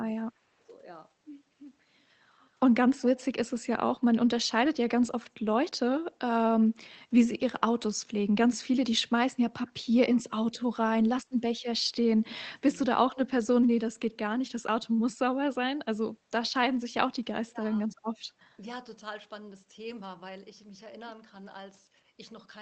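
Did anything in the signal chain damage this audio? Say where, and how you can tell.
Yes: speech suppressed in double talk at 0.21–0.68 s, 9.08–11.32 s and 17.44–17.91 s. The waveform sags by up to about 25 dB, likely from the call-processing echo canceller.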